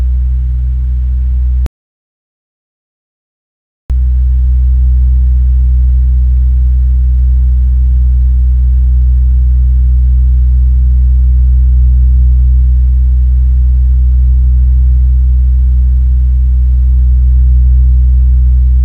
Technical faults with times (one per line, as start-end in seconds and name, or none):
1.66-3.90 audio dropout to silence